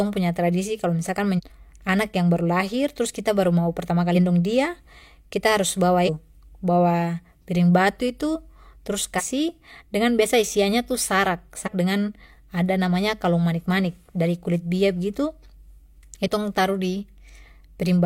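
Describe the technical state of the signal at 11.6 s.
A small forward jump in the speech occurs between 11.63 and 11.69 s, just before "dengan ada namanya". These are compressed frames skipped: about three frames of roughly 43 ms each, around 150 ms of audio, never decoded, so the audio leaps ahead by that much.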